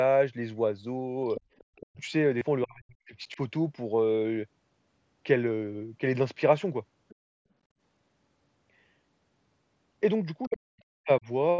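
A speech recording made over a Bluetooth headset, with audio reaching up to 8 kHz, carrying three kinds of fault. The other side's voice leaking through is most likely an echo canceller leaving part of the loudspeaker signal in the microphone path. Faint scraps of a second voice appear from 1.35 to 1.41 s at about 15 dB below the talker, from 1.58 to 1.86 s at about 25 dB below, and from 7.09 to 7.15 s and 10.43 to 10.57 s, both only about 30 dB down. Speech suppressed in double talk likely comes from the same canceller, which, faced with both sides at once, turns everything down rather than risk passing echo. The talker's voice drops out almost entirely, by roughly 40 dB, from 1.81 to 2.01 s, 2.65 to 3.16 s and 10.48 to 11.27 s, each overlapping or following the leaked voice. A shallow dip of about 5 dB follows from 3.34 to 3.39 s. Concealed Bluetooth headset packet loss happens when headset-to-phone packets go missing and the receiver repeats a matching slice of recent waveform to fill the gap. 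The 30 ms loss from 2.38 to 2.41 s gives a short buzzy hold with a slight warble as real audio resumes, while the single 7.5 ms losses at 5.67 s and 8.72 s are almost fully hidden.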